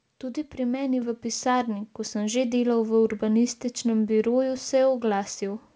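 At 1.02 s, right after "pri meni" and before "v pisarni ko sem", the speech and the room noise behind it jump up together by about 5 dB and stay there. This is a microphone volume step-up: the call software judged the input too quiet and raised the device's gain in a single step, over a G.722-style call path with nothing above 8 kHz.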